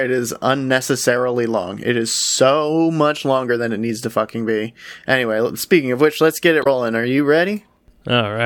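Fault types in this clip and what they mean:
Damaged data in a compressed stream: part of the encoded speech data is corrupt, so the decoder misreads those frames, loses sync and searches for the next valid header, producing a brief disruption from 6.60 to 6.67 s, about 70 ms long.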